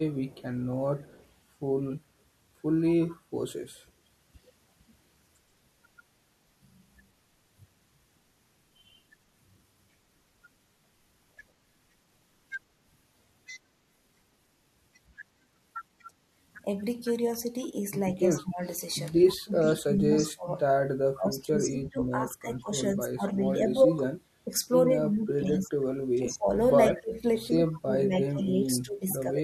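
From 0.08 to 1.9 s, a faint copy of the speech trails it by 128 ms. This echo leak sits far below the speech. A speakerphone's echo canceller likely let some of its microphone pickup through and sent it back.

At 3.62 s, speech suppressed in double talk cuts the speech sharply for a brief moment, by about 25 dB. Both sides were talking. The canceller likely mistook the talker for echo and turned the talker down.

From 18.36 to 20.27 s, the echo leak returns much stronger, about 10 dB below the speech. From 18.38 s to the end, the speech also dips again and again, by up to about 20 dB. These gaps add up to roughly five seconds.

At 25.65 s, a tiny scrap of echo can just be heard. From 26.87 to 27.77 s, a clearer echo follows, again 128 ms late.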